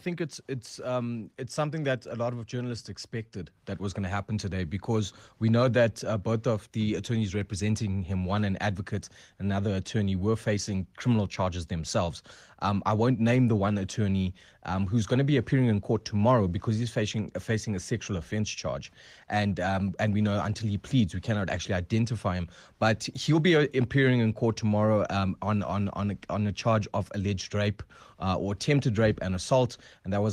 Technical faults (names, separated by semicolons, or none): none